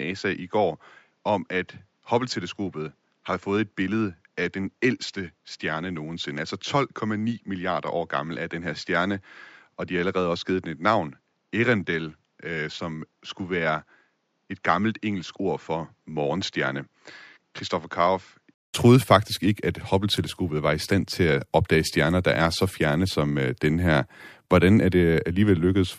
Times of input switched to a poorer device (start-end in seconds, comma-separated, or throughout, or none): 0.00-18.74